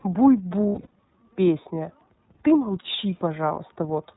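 Throughout, the speech sounds band-limited, with nothing above 4 kHz, and has a slightly rough, synthetic edge. This is the iLBC codec. Its character points to the 13.33 kbps mode with 30 ms frames, each frame's excitation coded on its own.

From 0.69 to 0.93 s the speech turns into a held, faintly buzzy vowel in several short patches, the longest about a tenth of a second. These are lost iLBC frames, roughly 180 ms of them spread over 240 ms. The decoder filled each gap by repeating the last pitch cycle mixed with noise, and the voice comes back clean almost at once.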